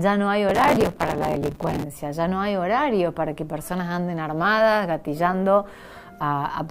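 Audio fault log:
0.49–1.83 s, processor overload crackle: a gritty, tearing crackle sits on top of the sound for over a second, then clears. The processor kept missing its buffer deadlines, and each miss replayed a scrap of old audio with hard edges. The rapid, closely packed ticks suggest buffers of around 5 ms, so the run amounts to something like a hundred misses. A single dropout would be one isolated gap, and clipping would follow the loudest peaks rather than the load.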